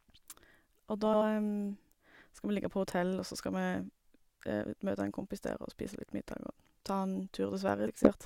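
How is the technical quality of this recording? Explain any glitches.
The speech is marred by two glitches, at 1.05 to 1.23 s and 7.87 to 8.11 s, both from frames out of order. In each, two neighbouring blocks of roughly 80 ms, which points to runs of about four frames, reached the decoder swapped and were played back that way. The stretch comes out with its halves exchanged, a brief garbled flutter, while the overall timing stays intact.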